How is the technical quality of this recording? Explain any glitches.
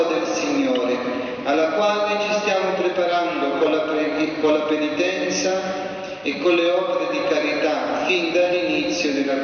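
No glitches or faults heard.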